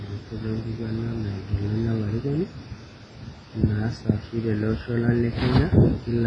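All the way through, the speech rings and washes with breathing hiss and nothing above 10.6 kHz, likely heavy WMA compression at something like 24 kbps.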